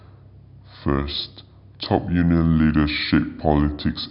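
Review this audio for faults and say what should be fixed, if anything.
A wrong sample rate runs through the whole clip: the speech plays at about 0.69 times normal speed and roughly 6.5 semitones low, sounding slow and deep. Speed and pitch drop together because the samples are clocked out unconverted, which fits 32 kHz material played at 22 kHz. To prevent it, carry the true rate in the file header and resample explicitly whenever the playback device runs at a different rate.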